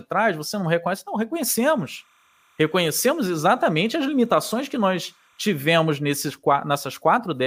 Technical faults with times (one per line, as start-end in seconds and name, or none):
1.57-5.60 timecode bleed